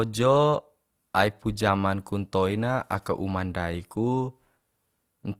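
Opus compression runs throughout this speech clip, likely the cause of its rough, grainy texture: with bits this scarce, which fits a rate near 24 kbps in music mode, thin bands get filled with noise, so tones turn noisy while full bandwidth up to about 20.2 kHz survives.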